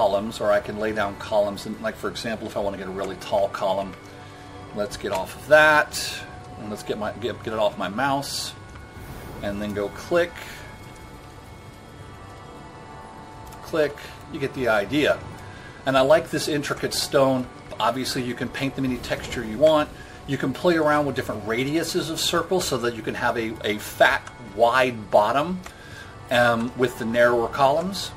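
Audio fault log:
throughout, MP3 compression: a watery, swirling texture with dulled treble and smeared attacks, likely from low-bitrate MP3 encoding consistent with roughly 64 kbps. Starved of bits, the encoder cuts the top band and drops weak frequency lines that flicker between frames.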